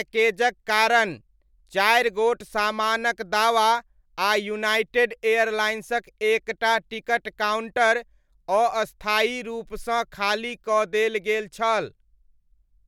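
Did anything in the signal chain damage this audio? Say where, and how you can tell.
No, nothing in the signal chain damaged this audio.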